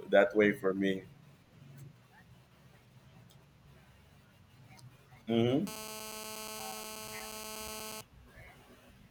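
A nearby 2G phone in a call was transmitting in bursts, and the audio circuitry rectified the radio pulses, causing GSM phone buzz from 5.67 to 8.01 s. It is a steady, hard, raspy 217 Hz buzz rich in harmonics, about 13 dB below the speech.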